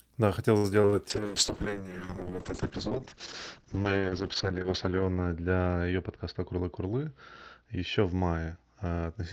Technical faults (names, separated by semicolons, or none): repeated packet loss (robotic sound); call bitrate drop